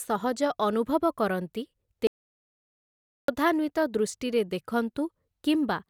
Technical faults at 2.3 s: audio dropout to silence

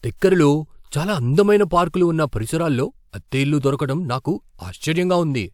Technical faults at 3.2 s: none

